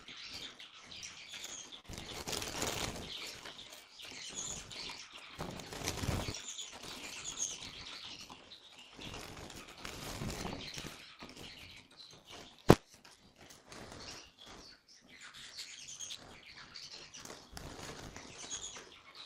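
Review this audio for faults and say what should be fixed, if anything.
Buffer tearing runs throughout as a steady 100 Hz buzz wherever there is signal. The writer and reader have slipped, so roughly a third of each 10 ms buffer holds audio about 20 ms stale.

Repeated stalls (stutter) occur from 1.37 to 2.56 s. Nine underruns were concealed by continuing prior sound, 147 ms in total with the longest 41 ms. Nothing is lost, but the audio drags.

Jitter buffer slow-down runs from 3.41 to 3.93 s at 89% speed. The receiver repeated pitch periods, adding 67 ms to rebuild its reserve, so sounds stretch without changing pitch.

Jitter buffer speed-up runs from 16.88 to 17.23 s at 108% speed. Roughly 40 ms of pitch periods were cut to shed excess delay, which makes that stretch sound hurried.

To prevent these, resynchronise the ring-buffer write pointer to the hardware read position, and stabilise packet delivery or give the jitter buffer enough headroom that it rarely needs to stall or time-scale.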